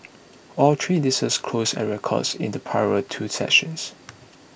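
Nothing technical is wrong with this short speech recording, so there's nothing here to chase down.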